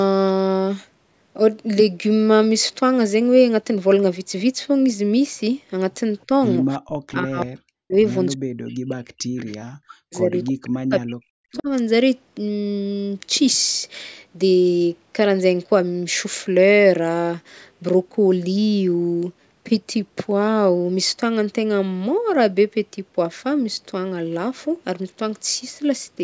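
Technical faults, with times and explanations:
6.78–6.89 s, 7.13–7.96 s, 8.33–10.34 s and 10.51–11.69 s, speech suppressed in double talk: the speech sinks by up to about 40 dB. The likely cause is an echo canceller that mistook overlapping talk for echo and turned it down.
7.42–7.46 s, 9.37–9.58 s, 10.46–10.70 s and 11.52–11.63 s, echo leak: faint scraps of a copy of the speech arrive 335 ms late, about 20 to 25 dB under it. This is likely loudspeaker sound that the far end's echo canceller failed to remove and sent back.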